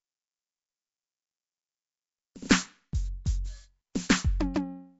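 Throughout the music, a rough, hissy haze and a smeared, underwater quality point to Nellymoser compression, likely at around 32 kbps. Nothing is heard above 7.7 kHz. At 3.25 s, pre-echo appears: a brief hiss lasting about 13 ms leaks ahead of a sharp attack, softening its onset.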